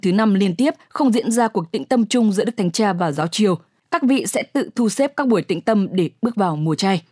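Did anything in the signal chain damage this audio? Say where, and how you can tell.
No, nothing in the signal chain has audibly damaged this speech recording, and the signal holds steady level, bandwidth and timing with no breaks, distortion or added noise anywhere along it.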